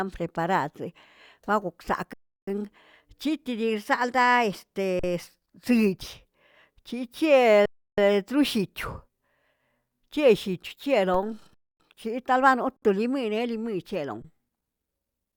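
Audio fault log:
2.13–2.48 s, 4.99–5.04 s, 7.66–7.98 s, 11.54–11.80 s, 12.77–12.82 s, 14.22–14.25 s: underrun with held sample. The output buffer ran dry, so the converter froze on its last value, giving sudden silence from 23 ms to 341 ms long; the second dropout follows "chitidizaldayi este". No audio is skipped: playback resumes where it stopped, so each gap ends softly.
11.14 s: DC step. The waveform's zero line jumps abruptly, heard as a single low thump while the speech carries on. The offset then drains away smoothly, much as a 2 Hz high-pass would let it fade, so it does not hold.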